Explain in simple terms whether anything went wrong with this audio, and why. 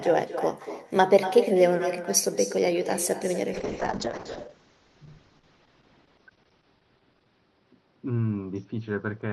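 Two things went wrong. The first is an echo with no canceller, heard throughout. The talker's voice comes back as a quieter, thinner copy about a fifth of a second later. The far end's loudspeaker was picked up by its microphone and sent back. Unlike ordinary room reverberation, this is a distinct repeat rather than a smooth tail.

The second is a call bitrate drop at 3.55 s, lasting to the end of the clip. The connection started sending far less data, so the sound turns rough and muffled, with everything above about 6 kHz cut away. Unlike dropouts from lost data, the sound never gaps. It stays continuously degraded.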